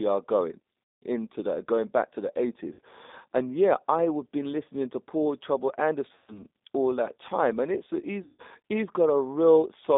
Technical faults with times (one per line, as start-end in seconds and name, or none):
0.00-9.97 G.729 codec
0.96-1.04 VoIP packet loss concealed by the speech codec
2.73-2.79 VoIP packet loss concealed by the speech codec
6.16-6.43 VoIP packet loss concealed by the speech codec
8.24-8.42 VoIP packet loss concealed by the speech codec